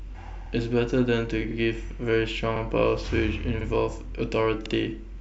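Speech with overlapping chunks: at 0.46–0.51, 1.51–1.56, 2.56–2.61, 3.61–3.66 and 4.66–4.71 s, a 50 ms slice of sound plays twice, giving a stutter with a click about once a second. The audio was handled in 1 s blocks, each starting 50 ms before the previous one finished. On a waveform each join shows a discontinuity followed by a repeated stretch; a spectrogram shows thin vertical broadband lines at those times, with the patterns just before them duplicated.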